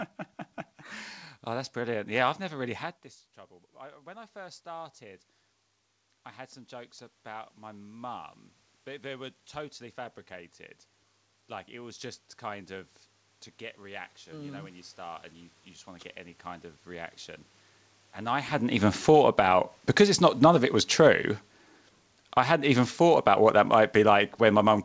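Automatic gain rising begins at 2.59 s, just after "I've never", lifting the level by about 5 dB until 5.29 s, and again from 6.68 s after "I had some", climbing about 12 dB through 17.2 s. Each time the input had dropped about 21 dB, and the control slowly compensated. Room noise swells along with the voice, which is what separates this from the talker simply moving closer.

Automatic gain falling runs from 18.52 s to 24.79 s, where the control pulls the level down about 8 dB. The voice sinks with its background, unlike a talker backing off, where the room noise would stay steady. Within this decline, a brief automatic gain rise from 19.45 s to 20.85 s pushes the level back up about 5 dB, so the level bobs before settling lower.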